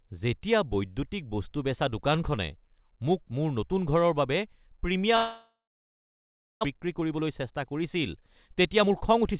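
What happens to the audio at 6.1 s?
At 6.1 s the audio is silent, inside a gap from 5.16 to 6.67 s, likely a long network dropout. The last sound stretches into a fading buzz, then silence, and about 1 s is lost. A spectrogram shows a smeared, decaying band, then a blank column; the waveform flatlines.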